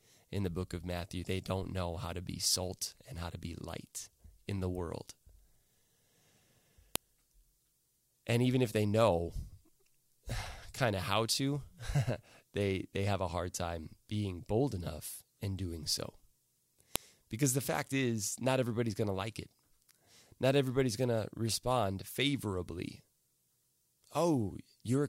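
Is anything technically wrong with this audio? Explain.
Yes. A file header played as audio: WAV pieces, about 10 s apart, were joined with headers intact, so header bytes play as a sharp click at 6.96 and 16.96 s.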